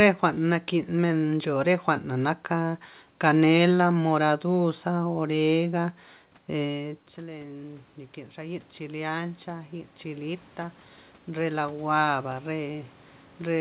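At about 6.5 s the talker moves away and the voice drops by roughly 16 dB. Then, from 6.54 to 10.49 s, automatic gain rising sets in: the gain control hears a weak input and slowly turns up its gain by about 8 dB over nearly four seconds. Voice and room noise swell together. On a waveform the envelope climbs steadily across that stretch, and on a spectrogram both speech and background brighten uniformly below the 4 kHz ceiling of the call path.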